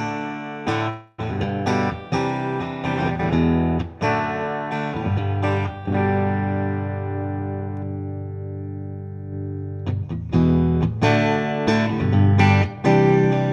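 At 0.89 s the sound stalls until 1.20 s. This is a call audio freeze. For about 290 ms the last sound is stretched into a buzzy, fading tail, with no drop to silence. The likely cause is packets held up in transit, leaving the jitter buffer empty. When they arrive, playback resumes where it stopped. Nothing is lost. The audio now runs about 290 ms later than before.

From 10.91 s to 11.66 s comes a jitter buffer speed-up. The audio plays at 110% speed but keeps its pitch. It sounds briefly hurried. The receiver had built up more delay than it wanted. To recover, it cut many tiny pitch-period slices in quick succession. Together they remove roughly a tenth of a second.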